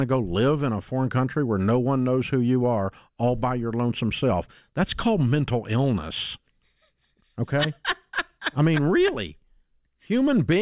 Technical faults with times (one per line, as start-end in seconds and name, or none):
none